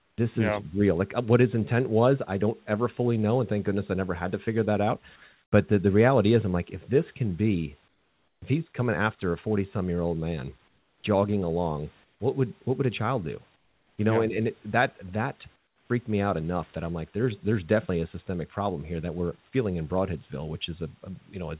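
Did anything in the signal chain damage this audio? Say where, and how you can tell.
Yes. In the call processing, the sender likely used discontinuous transmission, so the receiver filled pauses with comfort noise in place of the background at 0.0–0.18, 5.32–5.52, 7.88–8.42, 10.68–11.04, 12.04–12.2, 13.56–13.98 and 15.56–15.9 s. The room noise turns flat and featureless, mostly about 6 to 9 dB quieter, though at 5.32 s the level holds.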